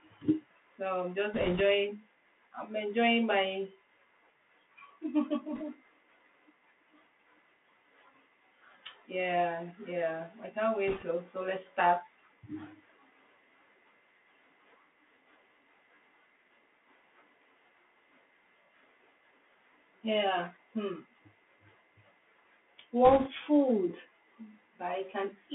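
The whole clip carries the Bluetooth CVSD headset codec. A one-bit delta coder with adaptive step size squeezes the speech into a 150 Hz to 3.5 kHz band. Sibilants turn scratchy, loud high sounds distort, and a granular hiss sits underneath. The damage is plainly audible.

Bit errors on the Bluetooth voice link hit from 1.34 to 1.61 s, 5.55 to 5.63 s, 10.88 to 11.05 s, and 23.05 to 23.29 s. Flipped bits in the delta stream add a rushing crackle, not loud clicks. The first burst is the heaviest, at a few percent.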